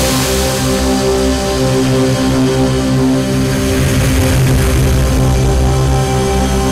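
A harsh, buzzing fuzz sits on every loud moment from start to finish, with a gritty crackle riding over the peaks rather than any clean attack. This is hard clipping: the sound arrives at roughly 12 dB more than the stage can pass, so its peaks are sliced flat, and nearly a third of the waveform ends up pinned at the limit. Those squared-off tops generate strong high harmonics, which is the rasp heard throughout.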